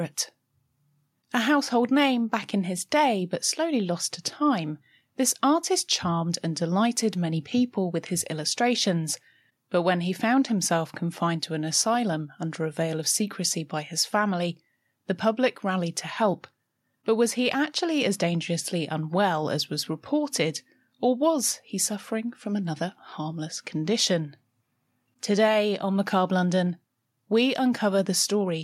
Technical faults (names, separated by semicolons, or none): none